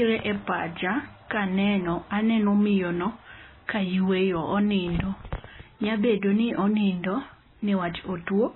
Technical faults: MP3 compression

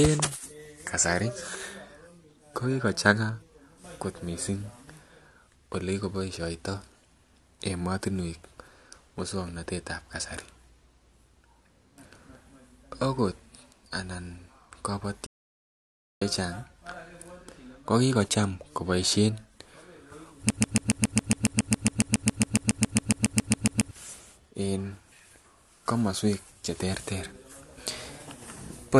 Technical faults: playback stall; broken-record loop

